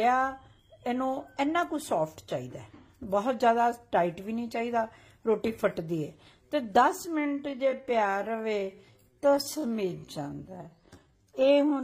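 From 7.15 s to the end, the pace suddenly drops to about 0.67 times normal speed while the pitch holds steady, so the audio drags. This time-stretched section likely comes from software lengthening the audio by repeating short pieces to preserve pitch.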